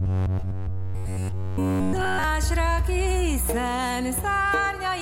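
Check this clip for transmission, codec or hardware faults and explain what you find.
One fault: from 0.01 s to 2.24 s the sound becomes a rigid, metallic buzz near 93.8 Hz. This is robotic sound from repeated short buffers, likely from a single roughly 10.7 ms chunk being looped while the real audio is skipped.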